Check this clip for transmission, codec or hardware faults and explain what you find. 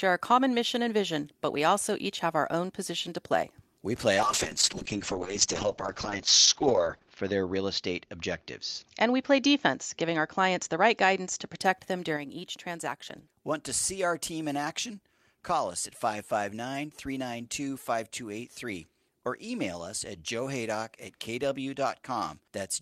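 Two faults are audible in this speech clip: a call bitrate drop followed by a lasting level step consistent with one channel dropping out.

From 4.17 s to 11.65 s the call bitrate drop pushes the encoder from 40 kbps down to 7 kbps, bottoming out for about 2.9 s. Coding turns coarse and the band narrows from 20 kHz to 8 kHz, so speech sounds muffled and watery. A spectrogram shows the region above 8 kHz going empty.

From 12.17 s through to the end, the speech falls abruptly by about 6 dB. This is likely one channel dropping out: the stereo mixdown keeps only half the shared content. The waveform shows a clean step down in amplitude at 12.17 s that never recovers.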